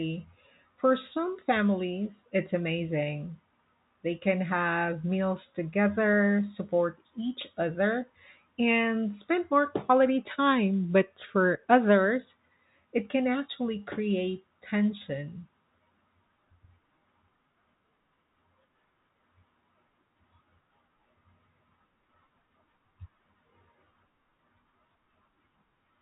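No faults are audible; the speech sits within G.711 telephone coding, with nothing above about 3.8 kHz, consistent with a 64 kbps mu-law line.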